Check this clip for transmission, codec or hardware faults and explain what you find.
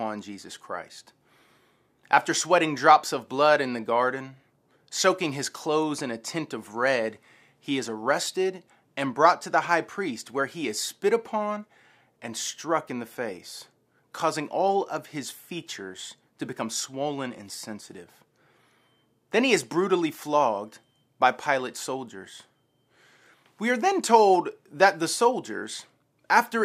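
Nothing in the recording points to a fault in how the speech was carried, encoded or picked up. There is nothing to list or explain.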